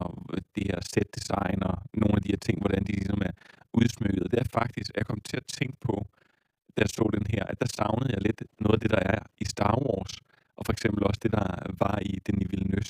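From start to finish the speech carries overlap-add ripple. Somewhere along the way the audio was chopped into windowed frames and stitched back together with an overlap that doesn't add up to a steady gain. So the level dips and swells once per frame, around 30 times a second, and the swing is deep, about 60 dB between loud and quiet points. You hear it as a rapid, rough flutter chopping through the whole voice.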